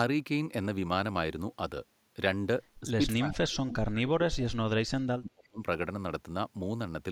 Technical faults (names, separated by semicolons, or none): speech suppressed in double talk